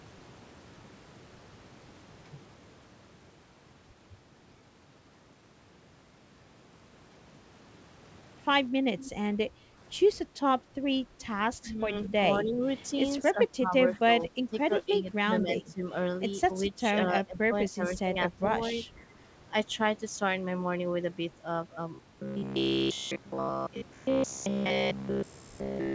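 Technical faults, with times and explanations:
8.99–9.11 s and 12.04–12.09 s, echo leak: a faint copy trailing by 205 ms, about 20 dB down, likely loudspeaker sound the echo canceller missed. Sound is added here, not removed.
9.5–9.67 s, background gated by the echo canceller: room sound drops about 6 dB for a brief moment, then returns. Only the background dips, not the foreground speech.
11.61–12.62 s, 13.33–15.83 s, 16.69–16.83 s and 17.14–18.47 s, speech suppressed in double talk: the speech itself dips about 10 to 15 dB in broken pieces, likely the canceller clamping down while both sides talked.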